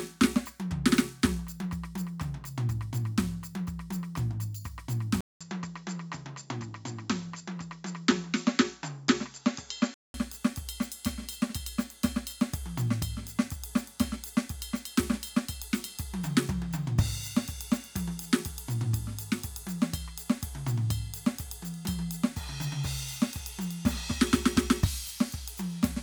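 A music recording that turns dull from 5.21 s to 10.14 s, with a short gap of about 0.2 s at the switch. In that stretch nothing comes through above 7.6 kHz, the top end is gone, and a faint new background hiss sits well below the music, with no obvious jump in loudness. At 10.14 s the full brightness returns. The cause is likely an input switched to a poorer device, a narrower-band microphone with its own noise, and then switched back.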